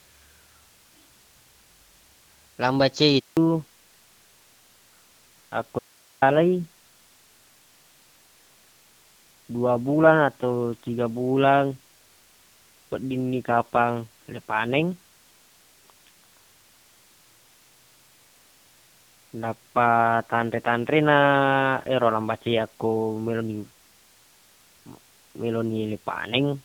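Speech here, starting out clear on what sounds like HD Voice, with only light wideband codec colouring. At 3.19 s, right after "lambace e", there's a handover gap: the call gets passed between networks, no speech frames come through, and the sound drops to silence for 180 ms until the new link picks up at 3.37 s. From 3.37 s to the end there's a fallback to narrowband, where the call drops from AMR-WB to AMR-NB. Everything above 4 kHz is gone, and the speech turns duller and a bit rougher, which fits a low narrowband rate of around 5.9 kbit/s. Then from 5.79 to 6.22 s there's an audio dropout to a faint residue: the signal cuts out abruptly for about 430 ms and comes straight back, with only hiss, about 35 dB below the speech, left in the gap. The likely cause is the wanted signal being lost while the rest of the path stayed live.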